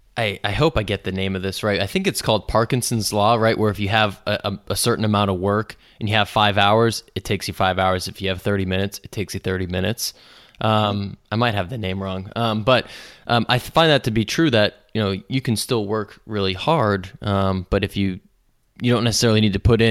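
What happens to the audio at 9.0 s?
Nothing goes wrong at 9.0 s; the speech continues intact through that moment.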